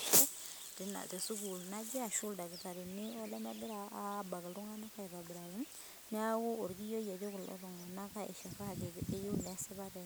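Low bit depth with dither runs throughout: the speech is reduced to 8 bits with dither added before rounding, giving a steady, even hiss sitting not far below the speech.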